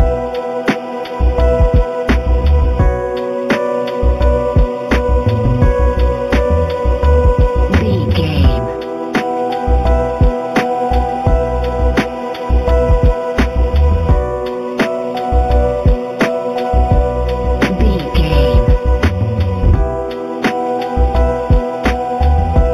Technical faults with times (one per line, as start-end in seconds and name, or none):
0.00-22.73 imaging from linear upsampling